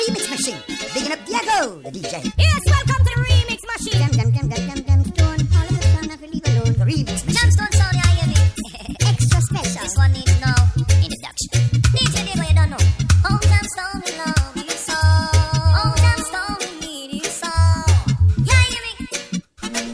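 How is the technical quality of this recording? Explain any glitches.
The recording has one fault, present from start to finish. It suffers from a wrong sample rate. The whole clip runs about 1.38 times too fast. Pitch rises with it, by about 5.5 semitones. That ratio fits 16 kHz material played back at 22 kHz without conversion. Everything sounds high and hurried.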